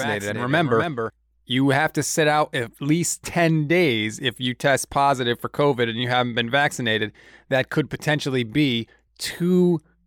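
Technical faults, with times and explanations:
0.0–1.1 s, doubled audio track: a copy about 5 dB down trails by roughly 300 ms, likely a second capture path; the spectrogram shows a shifted duplicate that stops abruptly.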